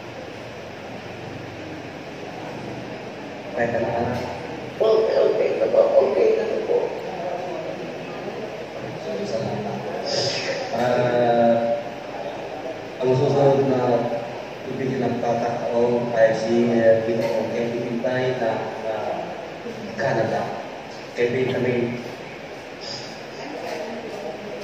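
At 6.96 to 7.01 s the compressed stream carries damaged data: a short run of bytes no longer forms valid frames, so the decoder misreads them and loses sync until it finds the next frame header. The result is a brief glitch lasting about 40 ms.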